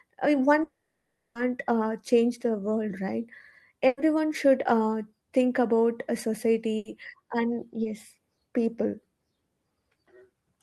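From 0.63 to 1.37 s the sound is replaced by a fading buzz or hiss that thins out, ending in about 160 ms of silence before the audio picks up later on. This long network dropout likely cost about 720 ms, which the receiver papered over before giving up.

At 3.87 to 3.99 s and again at 6.77 to 6.87 s, the sound briefly freezes into a held, dimming buzz or fading hiss and then jumps ahead. Each is a burst of packet loss, about 100 ms and 80 ms respectively, where the receiver stretched the last sound until real audio resumed.

Between 7.83 and 7.87 s there is a short smear or wobble. This is a short concealed packet loss: a few hundredths of a second never arrived in time, and the gap was filled by extending the preceding sound and blending it back in.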